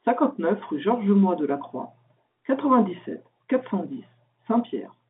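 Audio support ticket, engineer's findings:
No faults found: speech carried on a normal G.711 telephone line, band limited to about 150 Hz to 3.6 kHz as expected for that path.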